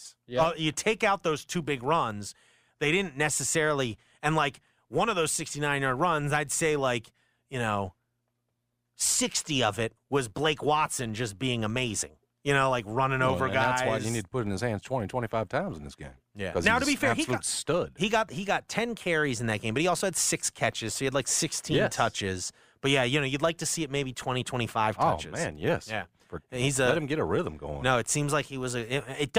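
A low buzz at 86.1 Hz runs under the speech from start to finish, swelling and fading with its level. It comes from a filter restarted on every block: each block starts from silence with a small transient, at a rate fitting 512-sample blocks.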